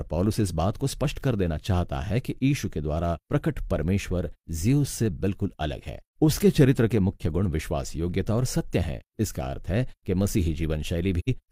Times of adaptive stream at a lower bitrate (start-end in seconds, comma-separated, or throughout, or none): none